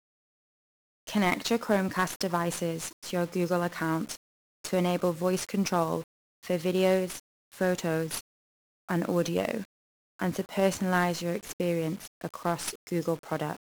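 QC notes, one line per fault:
Throughout, 1-bit DFPWM compression: one-bit adaptive slope coding buries the speech in dense fuzzy hiss and crackle, consistent with about 48 kbps, unlike warbly transform-codec artefacts.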